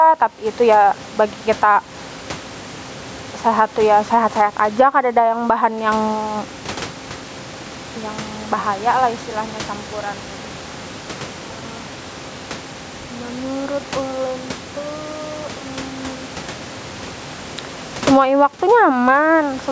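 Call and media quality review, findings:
Gain pumping, throughout. Input gain set far too high, likely with a fast limiter or compressor clamping each loud sound. Gain swings by around 15 dB; dynamics squashed. Call microphone processing as expected, nothing above 8 kHz; room noise sits about 33 dB below speech.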